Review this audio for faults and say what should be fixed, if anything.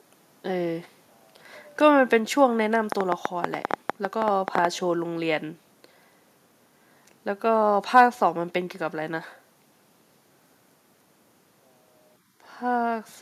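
Train of clicks, 2.92 to 4.66 s: about fifteen similar pulses at an uneven 9.3 per second ride well above the speech, likely from interference or a faulty connection or power supply. To prevent this, move phones and power supplies away from the cabling and reseat or replace the interface connection.

Microphone overload, 7.96 to 8.01 s: a peak drives about 2 dB past the converter's limit, flattening a few percent of samples into a brief harsh crackle. To prevent this, lower the input gain so the loudest syllables keep some headroom.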